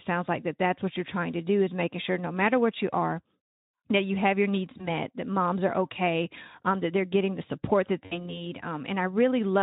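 At 4.77 s and again from 8.06 to 8.40 s, the speech shows VoIP packet loss concealed by the speech codec. The first sounds like one missing 20 ms frame, and the second like three frames, about 60 ms. The decoder filled each gap by extending the last pitch and filter at falling gain, so the sound is stretched into a buzzy tone or coloured noise that fades. The voice stays weak or distorted for a moment after each event, past 4.88 s and 8.40 s, while the Speex-coded voice recovers.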